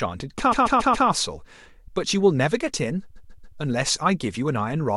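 From 0.51 to 1.07 s the speech stutters: a 129 ms stretch plays four more times in a row, adding 0.56 s. From 3.15 to 3.57 s the same stutter returns, with a 139 ms block repeated three extra times, adding 0.42 s. These are repeated frames. A short run of compressed frames, which fits a group of six, was written or delivered more than once, so the decoder replayed the same slice and the clip grew longer.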